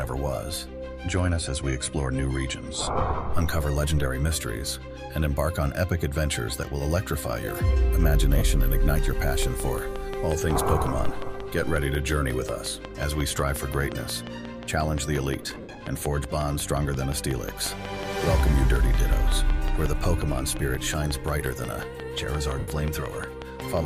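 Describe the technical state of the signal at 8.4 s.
At 8.38 to 8.42 s, lost LE Audio frames leave a 30 ms gap that fits a few missing LC3 frames. The decoder fills it by repeating the last spectrum with randomised signs, so the sound briefly turns into a noisy smear.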